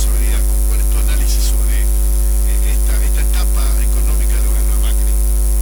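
No technical faults can be heard anywhere in the recording.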